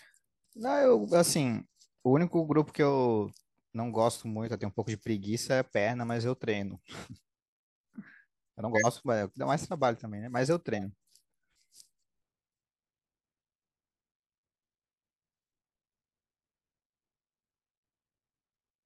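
Corrupt frames decoded appear three times in this speech: 7.01 to 7.17 s, 8.75 to 8.86 s, and 10.76 to 10.83 s. Each time, damaged bits in a few compressed frames were decoded anyway, so misread gains and codes sprayed energy into the wrong frequencies. The result is short squeaky bursts: faint at 7.01 s (peak about -40 dBFS), loud and obvious at 8.75 s (about -10 dBFS), and moderate at 10.76 s (about -25 dBFS).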